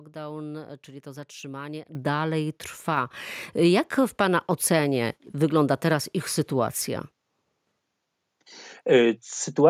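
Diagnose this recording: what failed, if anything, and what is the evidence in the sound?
Microphone volume stepped up at 1.95 s: the whole signal, speech and background together, jumps by about 10 dB in a single step. This points to the call processing stage, where automatic gain control judged the microphone too quiet and raised the device's input volume at once.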